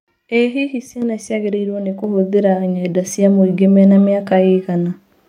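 At 1.02 s and again at 2.04 s the microphone volume is stepped up: the call software judged the input too quiet and raised the device's gain in a single jump, by about 7 dB and then about 6 dB. Speech and background noise rise together instantly. On a waveform the envelope widens abruptly at each point and stays wider; a spectrogram shows every band, including the noise floor, brightening at once.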